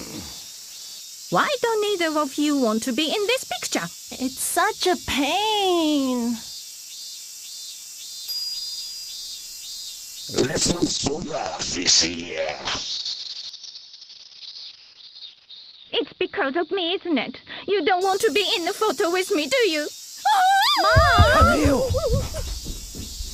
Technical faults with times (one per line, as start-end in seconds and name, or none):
10.38-19.57 call bitrate drop